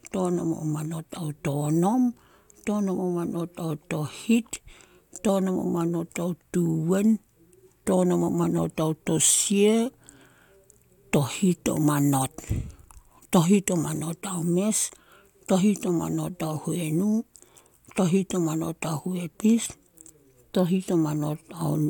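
No technical faults occur at any point in the recording, so there is nothing to describe in time order.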